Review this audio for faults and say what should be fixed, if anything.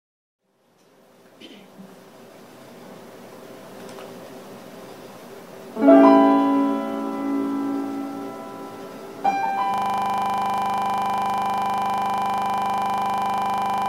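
At 9.74 s the audio abruptly locks into a harsh, rattling drone that runs to the very end. The same 40 ms fragment repeats exactly, about a hundred times, at a rate of 25 Hz, low enough to sound like a rapid flutter rather than a smooth tone. This is a system hang loop. The computer or its audio driver stalled, and the sound hardware kept replaying the last contents of its ring buffer. That points to a buffer roughly 40 ms long. To prevent it, fix the underlying freeze in the driver or host software and add a watchdog that mutes output when the buffer stops being refilled.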